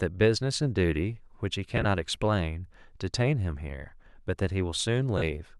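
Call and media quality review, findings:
Brief noisy smears at 1.77–1.85 s (gaps scattered, longest run around 20 ms) and 5.18–5.23 s: lost LE Audio frames, LC3 concealment repeating the last spectrum with randomised signs.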